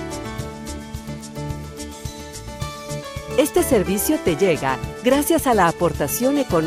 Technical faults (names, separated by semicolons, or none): none